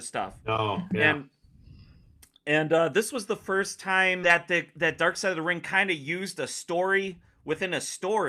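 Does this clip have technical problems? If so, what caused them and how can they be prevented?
Yes, two of them. At 4.23 s there's a skip ahead: about a second of speech got thrown away, probably dropped when the jitter buffer overflowed, and playback jumps straight across with no fill. Giving the buffer more headroom or letting it adapt its target would keep it from overflowing like that. From 6.73 to 7.64 s there's a jitter buffer speed-up: the buffer was holding too much, so it trimmed tiny pitch-period slices and ran about 5% fast, shaving around 50 ms and sounding a bit hurried. Steadier packet delivery upstream means fewer bunched arrivals and less catch-up trimming.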